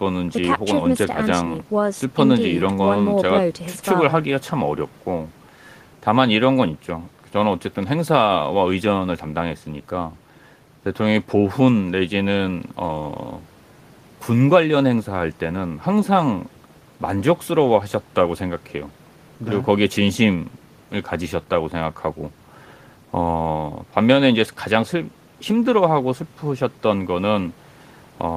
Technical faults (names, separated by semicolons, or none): none